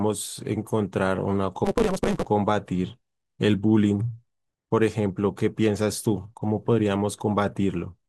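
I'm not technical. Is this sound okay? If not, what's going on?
No. From 1.64 to 2.26 s the speech rushes at about 1.88 times normal speed, with a 188 Hz buzz, though the voice's tone stays the same. This is a block size mismatch (truncated): one stage sends longer chunks than the next accepts (the buzz fits a 256-sample read), so each chunk's end gets dropped.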